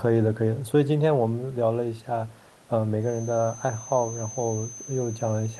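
Feedback whistle, from 2.98 s to the end of the clip at 5.60 s: a thin, steady tone near 6.2 kHz sits behind the speech, roughly 15 dB under it, swelling and fading slowly in level without ever building up. The likely cause is the loudspeaker-to-microphone loop hovering right at its feedback threshold, so that single high frequency keeps recirculating but never runs away. The quiet room noise underneath stays well below the whistle throughout.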